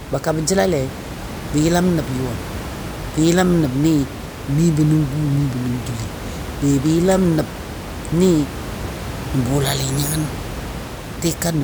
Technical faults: none

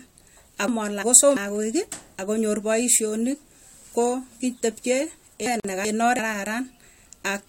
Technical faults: chunks out of order; gap at a join of encoded pieces

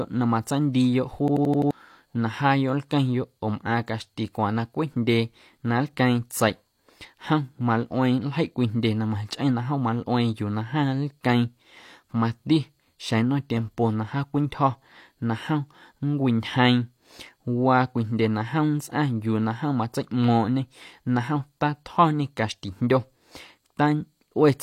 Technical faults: system hang loop

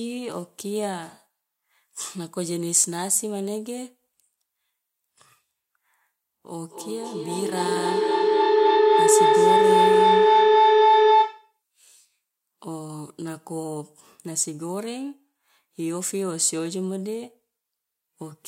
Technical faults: feedback howl

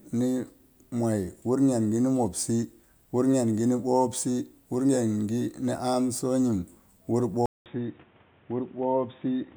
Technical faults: input switched to a poorer device

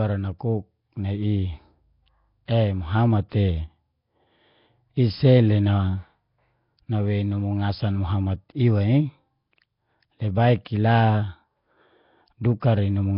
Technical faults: Nellymoser compression; pre-echo

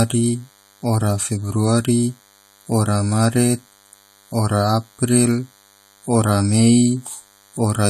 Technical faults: DECT cordless phone buzz

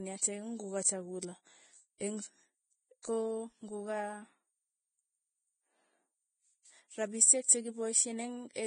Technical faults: Vorbis compression; pre-echo

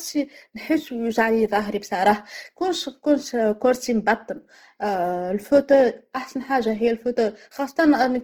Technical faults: Opus compression

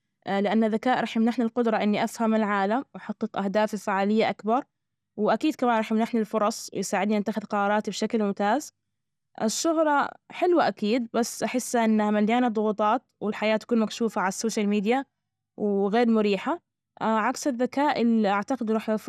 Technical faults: MP2 compression

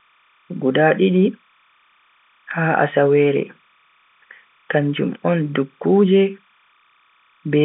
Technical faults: timecode bleed

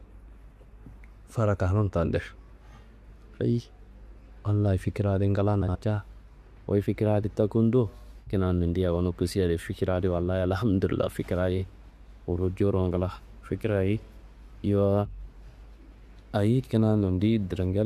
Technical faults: frames out of order

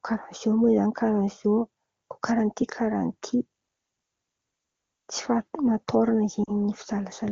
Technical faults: lost AMR speech frames

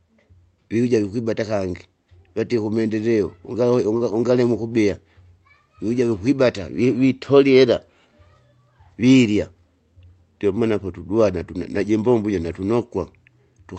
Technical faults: short stall from a late packet

